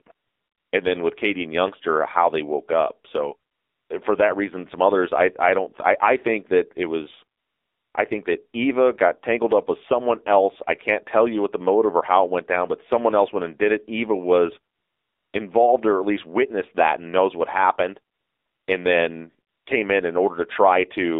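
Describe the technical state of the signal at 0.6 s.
At 0.6 s the signal sits inside AMR comfort noise running from 0.12 to 0.72 s. No speech frames are sent, so the receiver substitutes smooth, steady synthetic noise for the real background. Underneath, the whole clip carries AMR narrowband mobile codec damage: a 300 Hz to 3.7 kHz line band and plainly buzzy, synthetic coding, which fits a low-rate mode around 7.4 kbps.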